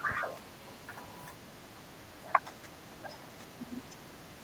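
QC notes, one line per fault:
0.07–0.6 s, 0.76–1.02 s, 1.32–1.42 s and 1.79 s to the end, speech suppressed in double talk: the speech keeps dipping by around 10 dB, closer to 15 dB in the last stretch, likely an echo canceller mistaking the talker for echo while both sides spoke.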